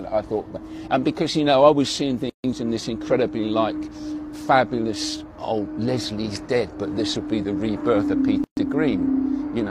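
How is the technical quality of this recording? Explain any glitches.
The recording has two brief dropouts where continuous sound suddenly goes silent and then resumes exactly where it left off. These are gaps at a join of encoded pieces. The first runs from 2.30 to 2.44 s (about 144 ms), the second from 8.44 to 8.57 s (about 130 ms), roughly 6 s apart. The edges are smeared by the codec, so the fully silent part is shorter. Each piece was encoded separately and joined untrimmed, so encoder start-up delay and final-frame padding remain as silence.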